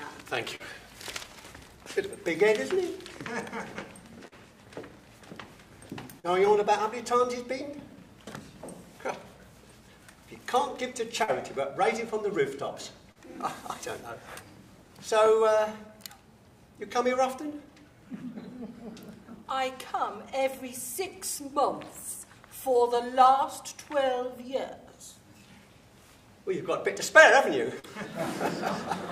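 Short concealed packet loss occurs six times, at 0.55, 4.28, 6.20, 11.23, 13.12 and 27.79 s. Each time, 40 ms of audio missed the decoder, which covered the gap by extending the preceding sound before blending back. The result is a brief smear or wobble.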